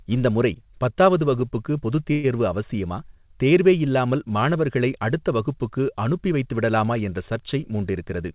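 At 2.12 s, right after "முறை பத்தாவது வகுப்புக்கு பொதுத்", the sound stalls for 115 ms, until 2.26 s. This is a call audio freeze, likely caused by packets held up in transit until the jitter buffer ran dry. The receiver bridges the wait by stretching the last sound into a short fading buzz rather than going silent. Unlike a packet-loss dropout, nothing is missing: the speech resumes exactly where it stopped, only 115 ms later.

From 7.94 to 8.30 s a jitter buffer speed-up occurs. The receiver trims tiny pitch-period slices to shed excess buffered delay, removing about 50 ms. Speech plays at 112% speed and sounds briefly hurried. Unlike a tape-style speed change, the pitch stays the same. Throughout, the narrowband call path cuts everything above 4 kHz, which fits G.711 mu-law at 64 kbps.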